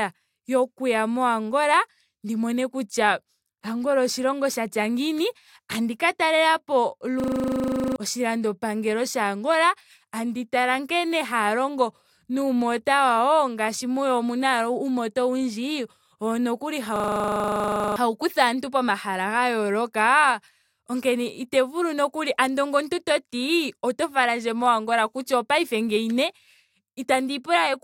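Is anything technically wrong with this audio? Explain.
Yes. There are two system hang loops, at 7.2 to 7.96 s after "ngiini tabdi ka talelapo" and at 16.96 to 17.96 s after "owundji owo nokuli". Each time, playback froze while the hardware kept replaying the same 40 ms of buffered audio. This produces a rapid 25 Hz buzzing stutter, and about 0.7 s and then about a second of speech are lost.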